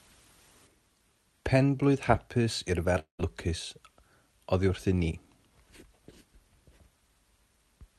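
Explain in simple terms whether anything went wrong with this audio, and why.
At 2.99 to 3.21 s the speech smears into a fading buzz, then goes silent; this is likely a long network dropout, with roughly 0.2 s lost, unlike a brief crackle.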